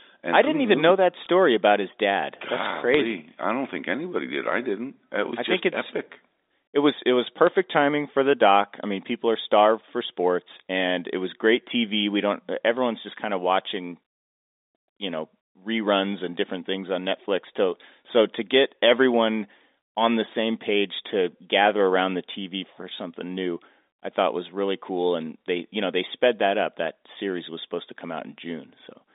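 Three bursts of bit errors on a digital phone line turn up here. There's a quick tick at 1.24 s right after "even who know that", a longer crackly patch from 2.94 to 3.11 s following "his dad golly that's", and another tick at 7.47 s after "it was it was". Flipped bits in the mu-law G.711 stream corrupt individual samples, at roughly one bit in a thousand, so the sharp ticks and crackle sit on top of speech that's otherwise unchanged.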